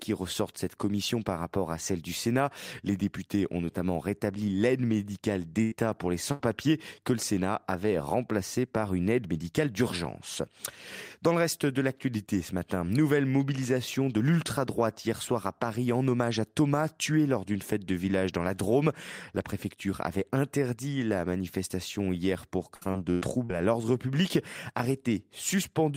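Speech with two kinds of network dropout. A burst of packet loss hits at 5.63 to 5.73 s and again at 6.31 to 6.41 s. Each time, about 80 ms of audio never arrives. The receiver fills the hole by extending the last sound and fading it out, so a voiced sound turns into a brief held buzz. Then the speech jumps ahead, with that stretch gone. Later, from 22.75 to 23.51 s, repeated packet loss gives a choppy patch. Five gaps fall close together, about 240 ms missing in all. The longest runs near 100 ms. Each is patched by repeating what came before, so roughly a third of that span is filler. The voice sounds broken there.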